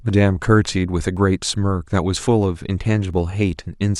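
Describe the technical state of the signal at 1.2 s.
Right around 1.17 s there's an overlap between stream segments: two segments' timestamps collide and the player trims the overlap, dropping about 9 ms of speech that was never actually duplicated. The waveform jumps across the gap, so you hear a small click or skip.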